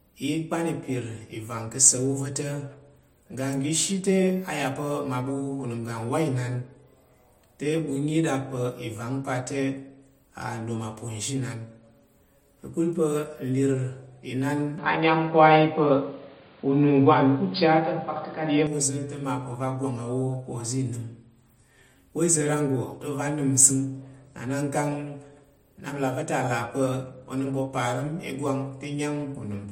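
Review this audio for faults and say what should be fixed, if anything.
From 14.78 to 18.67 s the speech suddenly loses everything above 4.9 kHz, so it turns dull and boxy. The level shifts by about 5 dB, and a different background noise comes in, roughly 35 dB below the speech. The change happens with no gap, then it clears up again at 18.67 s. That pattern points to an input switched to a poorer device, likely a fallback mic or a headset call profile that briefly took over. To prevent it, pin the recording input to one device and turn off automatic device switching for the session.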